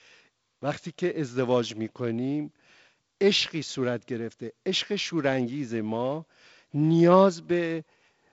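Speech carried by G.722 wideband telephone coding at 48 kbit/s, with content extending up to 7.7 kHz and only the light coding noise that this reduced rate brings to the bands, shows no technical faults.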